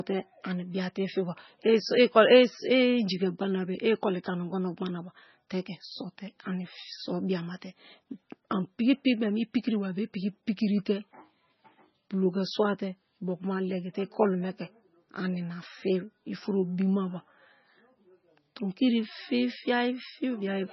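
Throughout, the speech sounds watery and swirly with nothing above about 5.9 kHz, likely heavy MP3 compression at a very low bitrate that zeroed weak frequency lines and cut the treble.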